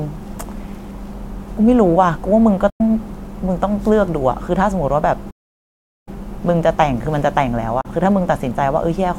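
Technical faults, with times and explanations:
2.70–2.81 s and 7.81–7.86 s, digital broadcast dropout: the speech quickly fades out over about 8 ms into a short hole and picks up again a little further on, with nothing bridging the gap. The first hole lasts about 96 ms, which fits three lost frames of 32 ms each. The second lasts 32 ms, which fits a single lost frame. The receiver muted because frames failed to arrive or failed their checksum, so that stretch of the broadcast is gone.
5.30–6.08 s, playback stall: the speech stops dead in mid-flow and stays silent for about 0.76 s before the sound carries on. This is far longer than the dropout holes. The likely cause is the player running out of buffered data or having its audio thread blocked, so the output sat silent until data or processing time returned.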